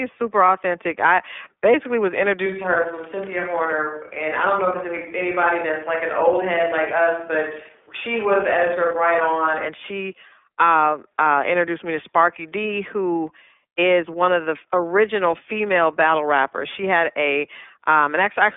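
Throughout the speech runs through the iLBC codec, a narrowband VoIP coder. Nothing is present above 3.7 kHz and the line band sits near 300 Hz to 3.5 kHz. Each frame's excitation is coded independently, which fits 30 ms frames near 13.3 kbps, leaving plainly audible roughness and a synthetic edge.

From 2.46 s, after "authentic I basically was", to 9.68 s, before "she uh uh introduced", there is a switch to a distant microphone, likely because the close microphone dropped out. The sound turns abruptly roomy and hollow, loses bass, drops roughly 5 dB, and picks up faint room noise well below the speech.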